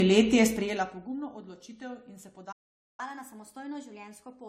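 Throughout the speech, generation loss gives a swirly, hollow smear, likely from repeated AAC-LC encoding at 64 kbit/s, around three passes, blurring attacks beyond what one encode would. From 2.52 to 3.0 s a playback stall cuts the sound dead for about 0.46 s, likely a starved or blocked player, with no fade like a level change. From 3.0 s to the end, catch-up at higher speed runs 1.15 times fast, raising the pitch about two semitones, so it sounds hurried and higher rather than just louder.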